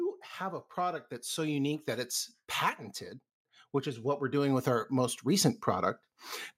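From 0.38 to 2.19 s you get automatic gain rising. The AGC decided the input was too quiet and brought its gain up gradually, about 6 dB over those 1.8 seconds, so the speech and the background swell up together. The same thing happens again from 4.02 to 5.94 s, another gradual climb of about 6 dB, with the whole signal, noise floor included, creeping louder rather than jumping.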